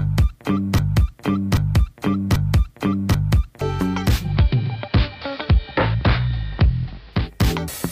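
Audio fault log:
0.79–3.61 s, broken-record loop: a 0.79 s chunk repeats exactly four times back to back, likely a stalled player resending its last buffer, so that stretch is lost.
4.16–7.31 s, digital radio blending to analogue: a 0.19 s cross-fade to AM audio shifts the level about 1 dB and brings in hiss around 30 dB down.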